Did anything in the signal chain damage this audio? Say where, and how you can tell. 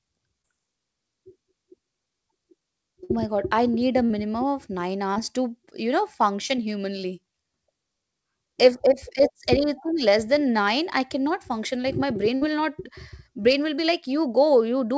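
Yes, at the network stage, heard through a call path whose content stops at 8 kHz, consistent with G.722. Short concealed packet loss occurs at 0.42–0.46, 5.14–5.18 and 6.47–6.51 s. Each time about 20 ms never arrived, and the receiver continued the preceding sound. On a spectrogram the sound smears briefly before blending back into the real audio.

Bursts of packet loss occur at 3.04–3.11, 4.05–4.12 and 12.35–12.43 s, removing about 60, 40 and 60 ms. The decoder stretched the last sound into a fading buzz or hiss, visible on the waveform as a repeating, decaying cycle. The speech then resumes further on, with the audio in between missing.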